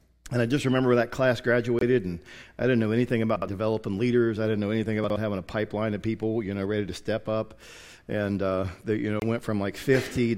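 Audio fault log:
1.79–1.83 s and 9.20–9.23 s, corrupt frame muted: a single damaged frame was dropped by the decoder and replaced with silence, so a roughly 36 ms gap cuts in abruptly.
3.36–3.48 s and 5.04–5.16 s, chunks out of order: a 60 ms chunk plays one slot late, swapping places with its neighbour, giving a jumbled moment with hard joins.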